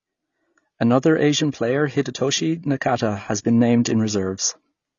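From start to finish the speech is dull and smeared, with a warbling, fizzy edge on sibilants, likely from AAC compression at a low bitrate, one that points to around 24 kbps. A spectrogram shows a hard ceiling at 7 kHz.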